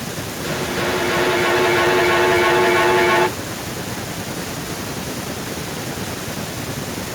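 From 0.44 to 3.47 s the speech comes back again and again at a fixed spacing of roughly a third of a second, with each repeat thinner and more ringing. This is feedback echo between two devices. A second device in the room replays the stream, and the first microphone picks it up, where its echo canceller cannot remove it. The repeats build to about 10 dB above the speech instead of dying away, which rules out ordinary room reverberation.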